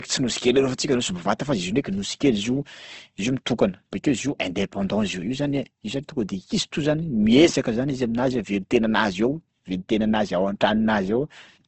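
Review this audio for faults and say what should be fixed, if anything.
Throughout the speech, nothing is present above about 8.2 kHz, and the coding artefacts of a very low-bitrate encode remain audible. This is likely low-bitrate audio saved at a high bitrate. The sound points to a speech codec near 16 kbit/s that was later wrapped in a high-bitrate MP3, which cannot restore the removed detail. To fix it, re-encode from the original uncompressed source rather than from an already compressed copy.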